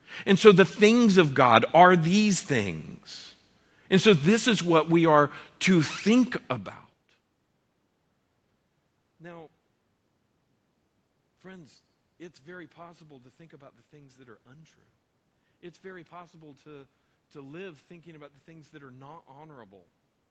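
Nothing in the signal points to a technical fault: the speech carries the background of the room and the band limit of a call path, with nothing above about 8 kHz, and the change in level around six and a half seconds in sounds like the talker shifting position relative to the microphone.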